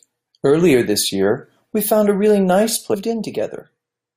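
Stream segment skipped at 2.93 s: the speech jumps abruptly forward with a brief blip, likely because one stream segment failed to load and playback resumed at the next.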